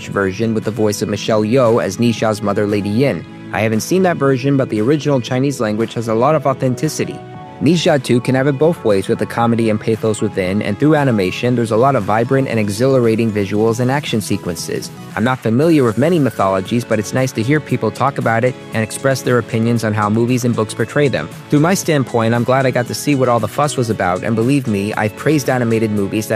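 Nothing here trips the ear at any point; there's no fault to point to anywhere in the recording.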